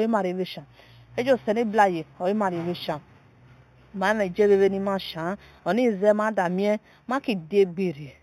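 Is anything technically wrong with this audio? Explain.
Yes. Throughout the speech, sibilants carry a faint metallic shimmer over a dulled top end. This is imaging from linear upsampling, which points to an 8 kHz source raised to 44.1 kHz by straight-line interpolation. That weak filter leaves a mirrored spectrum copy between 4 and 8 kHz, roughly 30 dB down.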